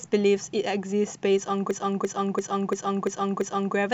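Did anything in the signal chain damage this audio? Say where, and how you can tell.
Yes. From 1.71 s to 3.76 s the speech stops moving forward and a single 341 ms fragment repeats exactly, six times, at about 2.9 per second. The result is a hard, machine-gun stutter rather than a buzz. This is a system hang loop at the driver or buffer stage. The host or driver stalled while the audio hardware kept replaying its ring buffer. A loop that long fits a 16384-sample buffer.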